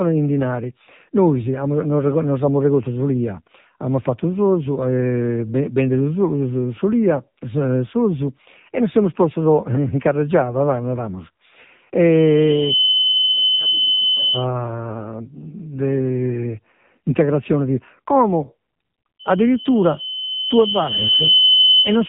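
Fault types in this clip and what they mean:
AMR narrowband mobile codec: The speech sounds thin, buzzy and synthetic throughout, with nothing above 3.8 kHz. This is heavy damage from mobile-phone speech coding at a low 6.7 kbps, where a simple vocal-tract model rebuilt from few pulses replaces the original waveform.
Loudspeaker feedback squeal: A steady 3 kHz tone swells into a squeal twice, from 12.12 to 14.45 s, building within under a second, then from 19.19 s to the end, rising over about two seconds to well above the speech. A microphone picking up its own loudspeaker causes it.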